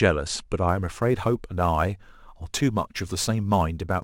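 From 0.69 s to the end, the speech carries sample clock jitter. The converter clock wanders by several microseconds. Loud, bright sounds gain a rough hiss that disappears in pauses.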